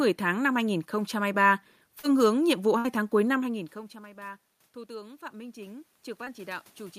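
Short concealed packet loss occurs at 1.99 to 2.13 s. About 40 ms of audio never arrived in time, and the receiver patched the hole with 38 ms of sound extrapolated from what came just before, then blended back. The result is a brief smear, and playback runs slightly late afterwards.

A burst of packet loss follows at 2.78 to 2.86 s. About 60 ms went missing in a row, and the decoder stretched the preceding sound across the gap for 61 ms, fading it out. It becomes a short held buzz or fading hiss before the audio picks up further along.

Automatic gain rising runs from 3.43 s to the end. Around 3.5 s the talker moves away and the level at the microphone falls by about 21 dB. The gain control responds by slowly raising its gain, so the voice and the room noise swell back up together over several seconds.

Short concealed packet loss recurs at 6.24 to 6.28 s. Here 20 ms was lost and filled with 21 ms of continued sound, heard as a brief smear or wobble.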